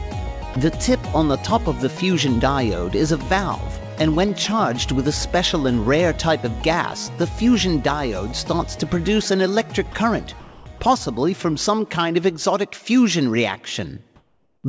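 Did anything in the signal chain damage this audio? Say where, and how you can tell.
Yes. In call processing, sound dropped by the voice detector at 0.54–0.56 s and 9.92–9.94 s leaves 20 ms flat-noise slivers in the waveform, likely from misjudged background.

Comfort noise in place of the background at 10.40–10.66 s and 14.16–14.64 s shows as featureless, smooth spectrogram noise shaped roughly like the background, about 2 dB off in the second, likely from discontinuous transmission.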